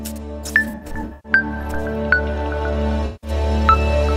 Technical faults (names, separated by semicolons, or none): AAC frame loss with concealment